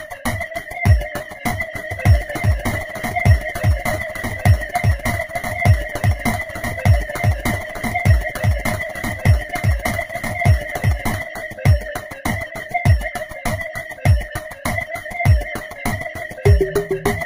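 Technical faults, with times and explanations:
1.91 to 11.25 s, doubled audio track: a second, full-band copy of the sound runs about one and a half seconds behind the original, roughly 5 dB quieter. It carries no decay or room colour, so it reads as a plain repeat rather than an echo, and it cuts in and drops out abruptly at those times. The likely cause is the same audio being captured again through a slower path, or an edit holding two out-of-step copies.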